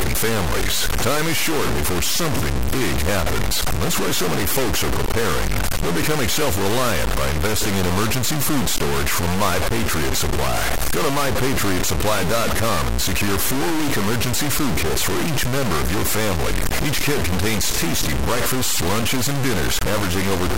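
Likely low bit depth without dither: across the whole of the speech clip the samples appear to have been truncated to about 3 bits, with no dither to break up the rounding. With so few levels, the quantisation error tracks the waveform and lands at roughly the same level as the speech itself. The result is a harsh, grainy distortion that shifts with every sound, and quieter passages crumble into sputtering or drop out altogether.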